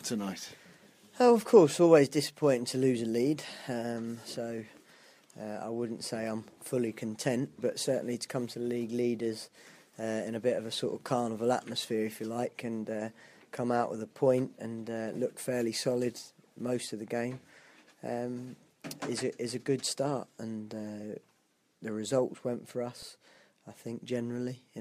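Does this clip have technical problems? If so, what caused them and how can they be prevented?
Yes. CD scratch ticks occur from 22.70 to 23.51 s: six regular ticks, each lasting no more than a couple of milliseconds. A surface scratch wipes out more data than the disc's error correction can rebuild, once per revolution, so the player conceals those samples by interpolating or muting them. Cleaning or resurfacing the disc, or ripping it with a secure, error-checking extraction tool, would prevent this.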